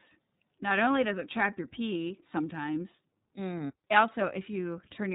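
From start to finish the speech has gone through the iLBC codec, and the damage is plainly audible. Everything above 4 kHz is gone, so it has that narrowband phone-line dullness. Each frame's excitation is coded on its own, without leaning on the previous one, which gives the voice a rough, slightly synthetic grain. The texture points to iLBC's 30 ms frame mode at about 13.3 kbps.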